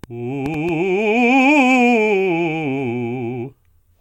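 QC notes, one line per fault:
0.04–0.70 s, train of clicks: about four sharp, similar-shaped pops at roughly 4.6 per second, unevenly spaced, standing out around 5 dB above the music. The repeated impulses, likely from electrical interference or a faulty connection, tick over the audio.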